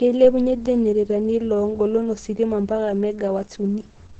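From start to finish the speech sounds dull, and a spectrogram shows a hard, flat ceiling at 8.6 kHz with nothing above it. This is likely low-bitrate audio saved at a high bitrate: the generous re-encoding cannot restore what the first codec discarded.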